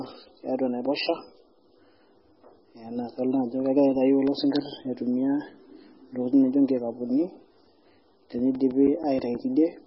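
Throughout, the speech has a watery, swirling quality with smeared consonants, and nothing is present above 5.6 kHz. This is most likely heavy MP3 compression, consistent with a very low bitrate around 16 kbps. On a spectrogram the treble stops at a flat ceiling, with patchy holes flickering below it.

From 3.80 to 4.75 s, seven regular CD scratch ticks occur, roughly seven per second. A disc blemish destroys more data than error correction can rebuild on each rotation, so the player patches or mutes the samples. The longest lasts about 3 ms, and each appears as a thin vertical line on a spectrogram and a tiny notch in the waveform.

From 8.39 to 9.51 s, eight more CD scratch ticks follow at a similar rate. The longest lasts around 10 ms and sounds more like a brief dropout than a click, visible as a short gap in the waveform.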